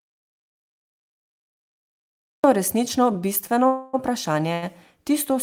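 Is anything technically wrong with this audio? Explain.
Yes, a few things. The speech starts out in an audio dropout to silence: from the very beginning to 2.44 s there's dead silence, no room tone at all. That points to the input likely being lost, a mute or broken link, with the recorder writing silence until it returns.

Then there are two short stalls from a late packet, at 3.47 to 3.51 s and 4.53 to 4.64 s. A packet showed up late, the jitter buffer ran dry, and the receiver held the last sound for 18 ms and then 88 ms before carrying on. Nothing's lost, but you hear a brief hold with a slight buzzy smear.

Between them, from 3.67 to 3.95 s, there's a call audio freeze lasting 267 ms, likely from packets held up in transit. The last sound gets stretched into a fading buzz rather than silence, then the speech resumes right where it stopped, shifted later.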